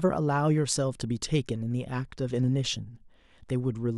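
Three single sharp clicks punctuate the speech, at 0.58 s, 1.71 s and 2.82 s, each spaced a little over a second apart. Each is heard as an abrupt tick with no audible gap, showing as a thin vertical line across the spectrum. The likely cause is dropped samples: only a handful of samples, well under a millisecond, go missing each time, so the waveform steps straight to a later value and the discontinuity produces the click.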